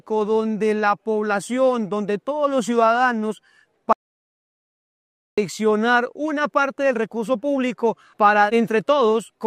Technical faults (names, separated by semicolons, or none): audio dropout to silence